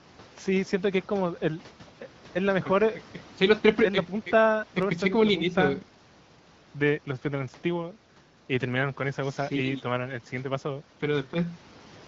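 Speech carried over the AMR wideband (HD Voice) codec at 15.85 kbit/s, with no technical fault to report.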